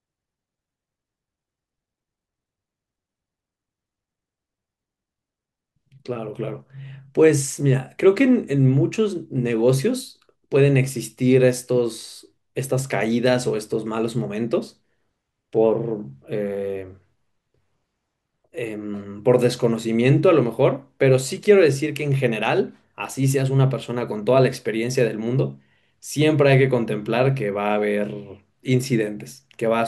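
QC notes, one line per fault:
Nothing stood out on listening to the speech.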